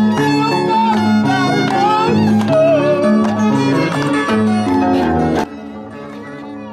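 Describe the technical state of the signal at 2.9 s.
At 2.9 s the signal is intact, with no dropout, distortion, glitch or other technical fault audible at that moment.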